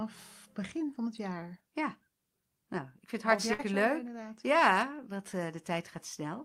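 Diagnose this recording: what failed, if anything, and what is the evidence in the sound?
The network stage failed: a burst of packet loss at 3.53 to 3.61 s in this speech, right after "ik vind het". For about 54 ms the receiver had nothing new to play, so it stretched the last received sound and faded it, giving a short held buzz or fading hiss instead of speech. Playback then jumps ahead, and roughly 60 ms of the original speech is simply gone.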